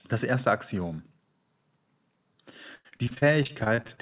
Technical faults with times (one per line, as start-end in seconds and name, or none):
2.75-3.99 repeated packet loss (robotic sound)